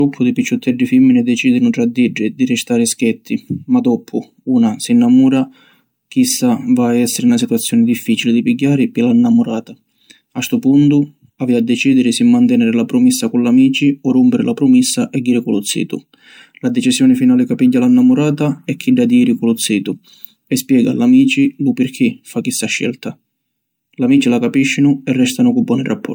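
Throughout the speech there is a swirly, smeared, hollow quality, with blurred attacks and more artefact than one encode would leave. This is generation loss, likely from the audio being MP3-encoded about three times, each pass at a rate that fits 96 kbit/s, stacking fresh quantisation noise and spectral holes.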